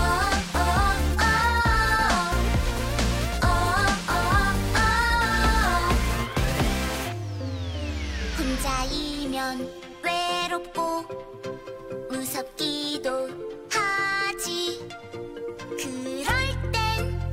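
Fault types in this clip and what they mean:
GSM phone buzz: a nearby 2G handset on a call, its radio bursts rectified into a hard 217 Hz buzz with harmonics, steady from 6.90 to 9.47 s, about 24 dB below the signal.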